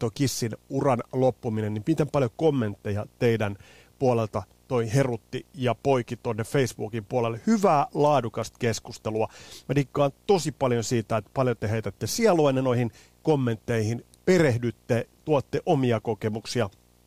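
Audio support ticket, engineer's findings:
Low steady buzz at 60 Hz with fizzy hash above it, well under the speech, present from start to end. Video or display buzz: screen or video cable coupling into the audio path at the picture's field rate.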